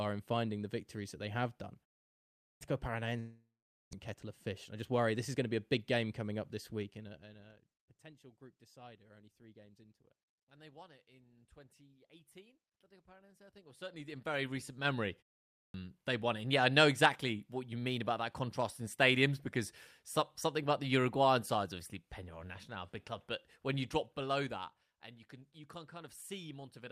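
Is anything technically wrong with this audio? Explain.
Yes, the speech has three kinds of fault.

Clipped start after a pause, at 2.34 s and 15.48 s: the output device dozed off during the preceding gaps of 0.57 s and 0.34 s and needed time to wake. About 0.27 s and 0.26 s of sound were lost, so speech bursts out abruptly, missing its opening.

Long network dropout, from 3.19 s to 3.95 s: the sound is held over as a fading buzz for about 0.74 s, falling to silence for roughly 0.45 s before resuming. About 0.6 s of audio never returns, likely because packets stopped arriving. The delay then shifts by roughly a tenth of a second.

Jitter buffer speed-up, from 4.25 s to 5.95 s: the receiver trimmed short pitch-period slices repeatedly to shed roughly a tenth of a second of excess delay. The speech runs about 6% fast at unchanged pitch and sounds slightly hurried.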